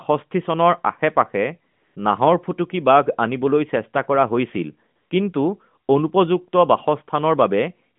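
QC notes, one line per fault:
1.72–1.96 s, 4.96–5.10 s, 7.96–7.99 s: AMR comfort noise. The sender stopped sending speech frames, so the receiver filled each gap with smooth, steady synthetic noise in place of the real background.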